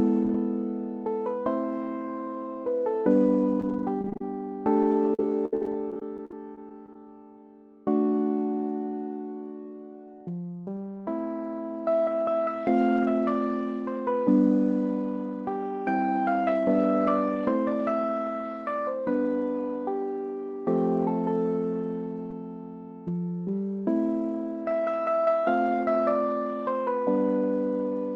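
Short concealed packet loss at 3.61 to 3.64 s: about 10 ms of audio failed to reach the decoder in time, and the receiver papered over it by extending the preceding sound for roughly 16 ms before blending back into the real signal. The result is a brief smear or wobble where the audio momentarily stops moving forward, and a very short sound falling in that slot can drop out entirely.

A lost packet rebuilt from error correction overlaps the end of that spot, at 3.63 to 3.64 s. Here about 10 ms was recovered from the low-rate redundant copy carried in the following Opus packet. That means no gap there, but that sliver sounds rougher and noisier than its surroundings, because the redundant copy is coded far more coarsely than the normal stream.

Repeated packet loss (robotic sound) follows in two stretches. From 4.02 to 4.21 s, four gaps, the longest about 30 ms, leave roughly 43% of that span concealed. 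From 4.76 to 7.06 s, fourteen gaps, the longest about 68 ms, are patched over about 17% of the span, with a small share recovered from error-correction copies. Each hole is filled by continuing the last sound before the next one arrives, so the audio turns choppy, with pieces missing.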